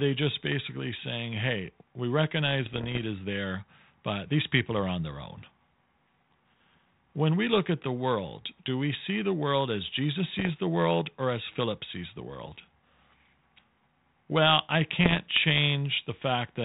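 Bit errors on an ADPCM link strike at 2.66–3.07 s after "basically saying hey we", at 10.28–10.49 s before "the world or as", and at 14.99–15.20 s. Each one produces pops and rough bursts with brief level jumps. These ring on briefly because every flipped bit also throws off the decoder's step size and predictor. That ringing sets them apart from the clean silent gaps of packet loss.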